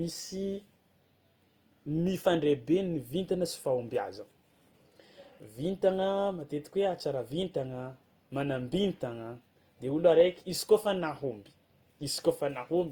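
A speech recording with a grainy, rough, noise-filled texture throughout and highs still reaching about 20.1 kHz, likely from Opus compression in music mode, at what sounds like about 24 kbps.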